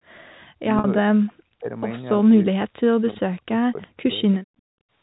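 A speech recording that passed through a telephone-style link carries three kinds of fault. Speech suppressed in double talk appears twice, from 0.57 to 1.76 s and from 2.22 to 4.22 s. The voice dips by as much as about 40 dB in pieces, for roughly a second and then a second and a half in total. The likely cause is an echo canceller that cannot tell its own talker from loudspeaker echo while both sides speak. Unlike a network dropout, these drops come and go with the overlap rather than as clean, fixed-length holes. Inside the first stretch, from 0.79 to 0.84 s, packet loss with pitch repetition bridges a 50 ms gap, which fits five lost 10 ms packets. What marks it out from the suppression around it is the sound of the gap: a held, slightly buzzy tone made of the last pitch period repeated, rather than a simple fall in level. At 3.82 to 3.87 s, an echo leak brings back a short scrap of the voice about 360 ms late and about 30 dB down. 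The likely cause is a far-end loudspeaker whose echo canceller let part of the microphone pickup through. The clear, single delay sets it apart from room reverberation, which would smear continuously rather than repeat a distinct fragment.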